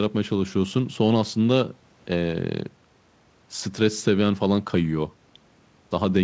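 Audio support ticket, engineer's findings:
No faults found on the speech. Audio passed through the WebRTC call path as expected, with the band ending around 8 kHz, which fits a wideband G.722 call codec.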